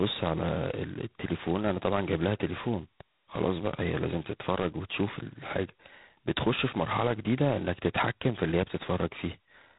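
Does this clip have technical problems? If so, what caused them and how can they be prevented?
Yes. Throughout the speech there is G.726 ADPCM damage: a harsh, rasping hiss rides on the speech and rises and falls with its level, and nothing passes above 3.8 kHz. The coder sends only a few bits per sample describing the error of an adaptive prediction, and the heavy roughness here fits the 16 kbit/s mode, with its 2-bit samples. Unlike steady background noise, this hiss vanishes in pauses. Unlike lower-rate vocoders, it leaves no warbly or robotic tone. To prevent it, run the link at G.726's 32 kbit/s mode or use a wideband codec with more bits per sample.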